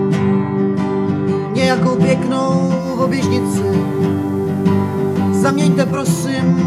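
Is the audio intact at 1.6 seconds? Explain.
Yes, at 1.6 seconds the audio is intact, with no dropout, glitch or other fault at that moment.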